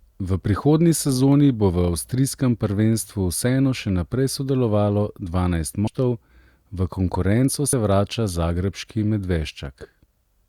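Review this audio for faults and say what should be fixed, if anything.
Compressed frames are skipped twice in this speech. At 5.87 s, just after "še naprej sodelovalo dvanajst", the audio jumps ahead by roughly a fifth of a second, which fits several 32 ms frames. At 7.73 s, between "v konkurenco" and "vrača zagrebški", a shorter jump of about 70 ms points to two frames. The decoder drops frames that are missing or damaged. Check file integrity and transport error handling so no frames go missing.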